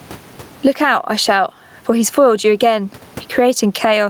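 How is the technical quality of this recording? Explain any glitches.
The recording is marred by gain pumping that runs through the whole speech clip. The level of the background keeps rising and falling with the talker: in each pause the room noise, which sits about 39 dB below the speech, swells up, then drops sharply as the next loud syllable arrives, with the gain swinging by something like 15 dB. The likely cause is input gain set far too high, with a fast limiter or compressor clamping down on every peak and releasing in the gaps. The speech comes out squashed, loud and soft parts pressed close together. What separates this from a noise gate is direction: a gate would cut the background to silence in the pauses, whereas here the background is loudest exactly there and is pushed down only under the speech.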